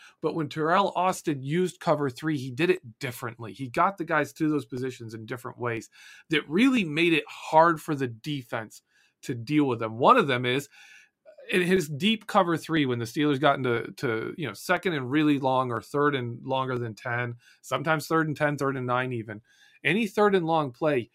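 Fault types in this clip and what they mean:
Periodic USB or driver dropouts: something in the system stalls the USB bus or audio driver once a second, skipping a tiny slice, about half a millisecond, of the speech each time, so regular ticks recur from 0.77 s to 20.76 s, roughly twenty in all.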